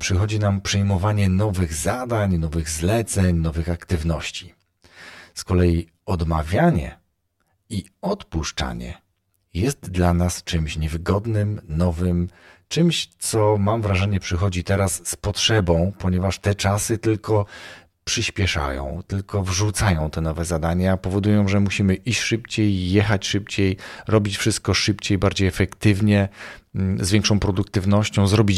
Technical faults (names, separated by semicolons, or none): channel delay (comb filtering)